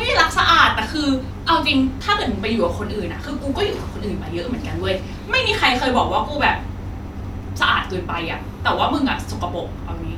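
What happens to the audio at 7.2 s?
Nothing goes wrong at 7.2 s; the speech carries on intact through that moment.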